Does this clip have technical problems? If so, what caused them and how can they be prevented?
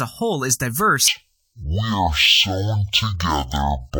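Yes. From 1.08 s to the end, the clip shows stereo read as mono: the decoder takes interleaved left and right samples as one sequential channel, so each stereo frame supplies two consecutive mono samples. Playback stretches to half speed (0.5x) and the speech drops a full octave, 12 semitones, sounding slow and deep. A faint mirrored copy of the spectrum also folds into the upper frequencies. To prevent it, read the channel count from the file header and pass it unchanged to the decoder and playback stage.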